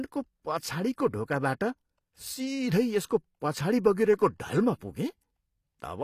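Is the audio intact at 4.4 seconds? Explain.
No. At 4.4 seconds, as across the whole clip, the speech carries plainly audible damage, likely from HE-AAC compression at a low bitrate around 24 kbps. The treble is rebuilt by copying lower bands upward, so s sounds turn gritty and lispy, with nothing above 14.9 kHz.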